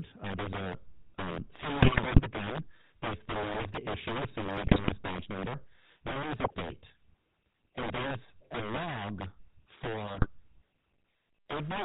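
Integer overflow runs through the whole speech clip. The signal was driven about 13 dB past the integer limit, so around 7 percent of samples wrap to the opposite sign instead of being held at the ceiling. Each wrapped peak jumps across the full range, producing cracks on the loud parts of the speech that are sharper and more broken than ordinary clipping.

The GSM full-rate codec is also present for the full length, and its damage is plainly audible. The band stops at 4 kHz, and the sound is consistent with the 13 kbit/s full-rate coder. That coder feeds a vocal-tract filter with regularly spaced pulses, and it keeps only every third excitation sample. The result is a buzzy, gravelly roughness over all of the speech.

GSM bit errors strike in five bursts, where corrupted filter, pitch or gain parameters reached the decoder and distorted the decoded frames:

1. From 1.80 to 2.21 s, between "there's a um" and "the gun".
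2. From 4.60 to 4.91 s.
3. From 6.42 to 6.55 s, just after "then there's".
4. From 8.24 to 8.33 s, just before "a log".
5. From 10.05 to 10.27 s.

Each burst breaks the speech into squawks, pops and gargling for the length of the bad patch. The first burst is the longest.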